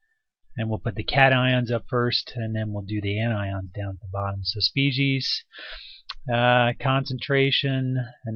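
Nothing in this audio catches the ear as a technical fault, so there's nothing to flag here.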